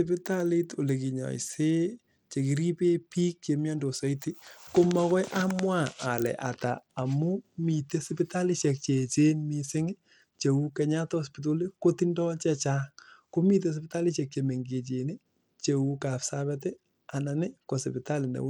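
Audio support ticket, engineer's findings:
Speech, full length: treble dropping out and flickering, gritty noise riding on the sound. Likely Bluetooth SBC compression, small bit pool starving the top sub-bands, consistent with about 96 kbps. Grit and aliasing rather than the swirly warble of perceptual codecs.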